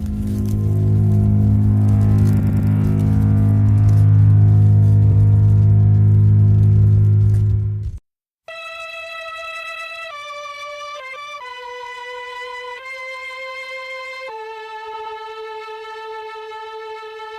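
Repeated frames stutter the audio four times: a 100 ms block plays three extra times from 2.39 to 2.69 s, an 80 ms block once more from 5.11 to 5.19 s, and 120 ms blocks twice more from 9.63 to 9.87 s and from 14.93 to 15.17 s. A run of compressed frames was delivered again, lengthening playback by 300, 80, 240 and 240 ms. On a spectrogram, identical slices tile side by side.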